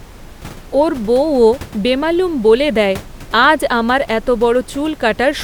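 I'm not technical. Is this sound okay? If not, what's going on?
Yes, there is nothing wrong with how this speech was captured or played back, and the faint background noise you may notice is just the natural sound of the room the microphone was in, sitting well below the voice.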